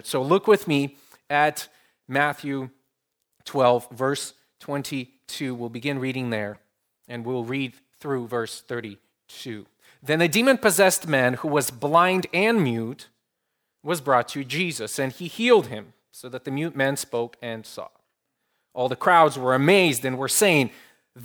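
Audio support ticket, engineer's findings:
Corrupt frame decoded, 6.54–6.56 s, between "begin reading" and "and we'll read through". Short chirp-like blip, about 24 ms, a single damaged frame. Decoder played flipped bits, so misread gains and codes put energy in the wrong frequency bins. Spectrogram: isolated block of out-of-place energy one frame wide. Waveform: small burst, quiet, around -35 dBFS at peak.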